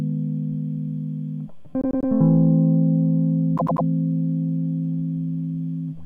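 Repeated frames occur at 1.81 s and again at 3.57 s in this music. Each time, a 96 ms slice of the compressed stream, which fits a run of four frames, was delivered more than once, so the decoder plays it three extra times before moving on. The result is a short stutter, the same fragment looping in quick succession, lasting until about 2.10 s and 3.85 s. Each stutter stretches the music by 288 ms.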